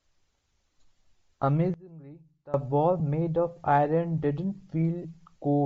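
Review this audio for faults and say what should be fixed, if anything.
Bluetooth LC3 compression runs through the entire speech clip and gives it a breathy, grainy edge. The damage is plainly audible and is likely from the LC3 codec. At a rate that fits a 32 kbps stream with 7.5 ms frames, the encoder zeroes much of the upper spectrum and fills the gaps with noise. On a spectrogram the high band looks patchy and speckled rather than carrying clean harmonic detail. Send the audio at a higher LC3 bitrate to prevent this.

Lost LE Audio frames cause brief smeared glitches at 0.47 s, at 3.00 s and from 5.02 to 5.05 s. The first two fit a single 7.5 ms frame each, and the last spans about three frames, 22.5 ms. In each gap the decoder repeats the previous spectrum with random signs, so the sound turns into a short noisy blur. On a spectrogram the harmonic lines dissolve into a small grey smudge, and the waveform shows a short stretch of noise-like texture. 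Keep the radio link strong and uncongested to prevent these drops.

One channel inverted, likely, between 1.74 and 2.54 s. When the stereo pair is summed to mono, the centred voice largely cancels and the level falls by about 21 dB. Only a faint copy made of the small difference between the channels remains. The waveform collapses to a much lower envelope for that stretch. Check polarity at each stage of the stereo path to prevent this.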